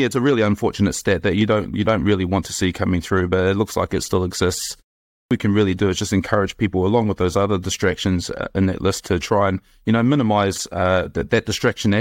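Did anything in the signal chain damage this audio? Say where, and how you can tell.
Yes, at the playback stage. After "like it still exists" comes a 0.44 s pause. When sound resumes at 5.18 s, the first 129 ms, up to 5.31 s, never arrive, so "can really do is" bursts in without its opening sounds. This is a clipped start after a pause: the output device slept through the silence and was still waking when audio returned. The waveform starts abruptly with no rise, and the spectrogram shows a hard vertical edge.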